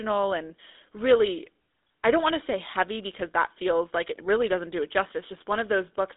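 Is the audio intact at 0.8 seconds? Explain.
No. At 0.8 seconds, as throughout, GSM full-rate codec damage is plain. Coarse pulse-driven excitation adds buzzy roughness. Nothing passes above 3.7 kHz.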